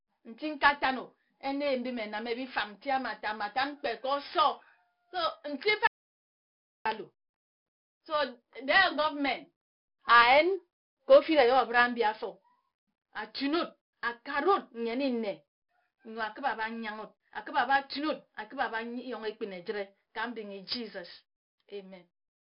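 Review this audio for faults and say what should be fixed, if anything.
The whole speech clip carries 4-bit ADPCM compression. Each sample is coded as a coarse step from a prediction, so gritty hiss rides on every loud syllable. Attacks distort where the step lags. Nothing remains above 5.3 kHz, which fits a low-rate 44 kbps stream. Keep a linear PCM master and encode only at delivery.

From 5.87 to 6.86 s there is an audio dropout to silence. For about 0.98 s the sound stops dead, with no room tone. The input was likely lost while the recorder kept writing silence. Secure cables and links, and monitor input levels while recording.

Between 11.12 and 11.40 s, hard clipping flattens the peaks. The signal overdrives a stage by about 2 dB. The squared-off tops add high harmonics, heard as crackle on the peaks. Lower the gain before that stage to leave proper headroom.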